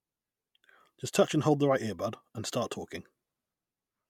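No technical faults are audible.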